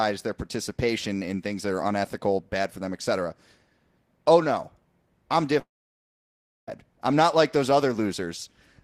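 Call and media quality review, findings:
Speech cuts at 5.59–6.69 s: brief fading buzz, then about a second of silence, resumes minus that chunk. Likely a long network dropout; concealment gives up.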